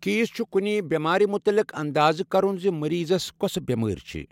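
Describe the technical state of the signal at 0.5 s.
At 0.5 s the speech signal is intact, with no audible technical fault at that point.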